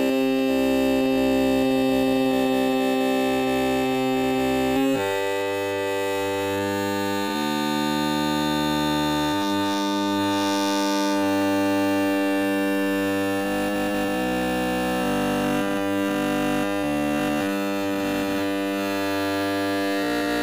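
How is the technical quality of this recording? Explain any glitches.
The recording has one recurring glitch: periodic USB or driver dropouts, once a second from about 0.39 s to 19.42 s, about twenty in all. Something stalls the bus or driver briefly, a tiny sliver of audio under a millisecond gets skipped, and you hear a small regular tick while signal is present.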